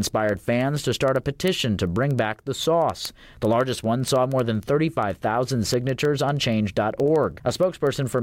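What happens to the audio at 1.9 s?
At 1.9 s you're in the middle of a run of word clock ticks that lasts from 0.14 s to 8.18 s. The receiver isn't locked to the sender's clock, drifting apart by roughly 300 ppm, so a sample slips about every 70 ms, giving a steady, sharp ticking over the speech.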